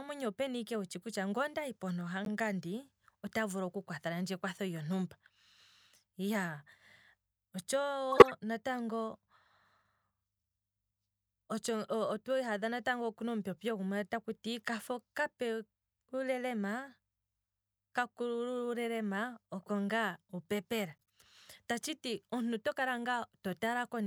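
Speech with corrupt frames decoded: bit errors reached the decoder, which played misread frames. There is a brief blip at 2.25–2.28 s after "ondahi pontu", a loud noisy burst at 8.12–8.31 s, and a faint chirp at 21.02–21.10 s. Each shows as a short, blocky patch of misplaced energy on a spectrogram.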